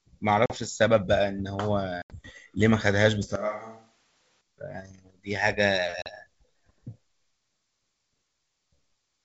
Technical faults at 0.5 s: packet loss on an ADPCM call

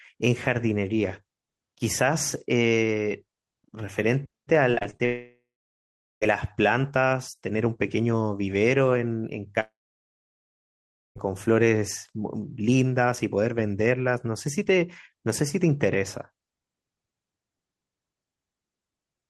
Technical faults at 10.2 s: long network dropout

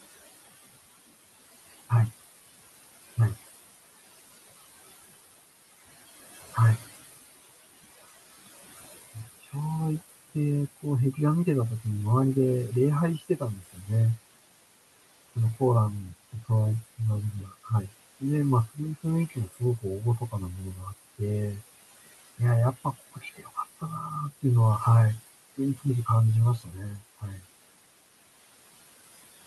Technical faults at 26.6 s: noise suppressor artifacts; speech cut by the noise suppressor

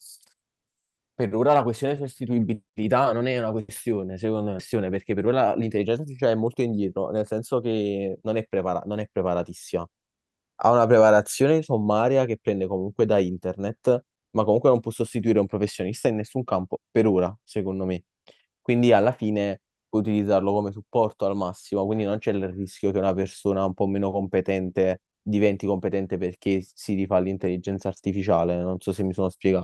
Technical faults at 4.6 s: skip ahead

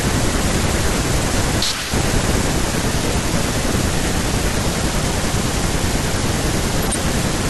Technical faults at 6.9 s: corrupt frame decoded

